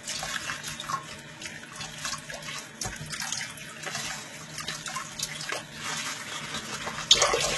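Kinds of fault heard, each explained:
HE-AAC compression: heavy damage throughout, likely from HE-AAC near 16 kbps. The treble is rebuilt from copied lower bands, so it sounds gritty and metallic rather than simply dull as with a plain low-pass, and nothing reaches past 11.8 kHz.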